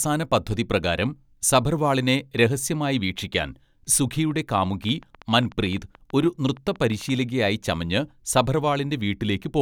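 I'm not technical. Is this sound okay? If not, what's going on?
No. From 4.31 to 7.10 seconds there is a train of clicks: roughly twenty sharp ticks, about 7.5 per second at an uneven pace, each about as loud as the speech itself. They keep going in the pauses too, which shows they come from outside the speech, not from the voice being distorted. Unlike a single pop, they repeat with much the same shape. The likely cause is electrical interference or a faulty connection or power supply.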